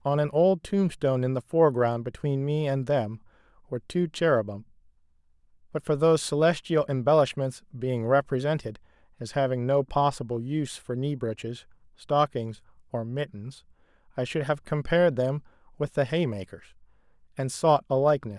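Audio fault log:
No audible faults found.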